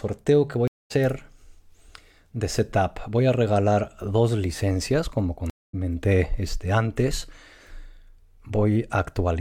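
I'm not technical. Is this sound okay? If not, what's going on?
No. There is a stream reconnect at 0.68 to 0.92 s and another at 5.50 to 5.75 s, just after "regalar dos licencias como". Each time the connection dropped, the player went quiet for about a quarter second, reconnected, and picked up roughly a fifth of a second further on, so a small piece of the speech is skipped.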